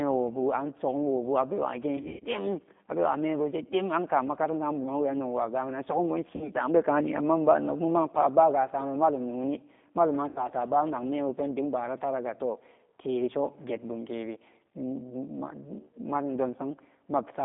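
From start to end the speech passes through a G.729 codec, which fits an 8 kbit/s rate: a spectrogram shows energy confined to roughly 200 Hz to 3.6 kHz, and the voice has a plainly rough, synthetic edge from pulse-based excitation.

VoIP packet loss concealed by the speech codec follows at 1.97–2.26 s (170 ms missing across 240 ms, longest gap 110 ms), 6.36–6.50 s (50 ms) and 10.29–10.42 s (70 ms). The decoder stretches its last pitch and filter into a buzzy tone or coloured noise that fades, which appears as smeared flat harmonics or smeared noise and a sagging envelope.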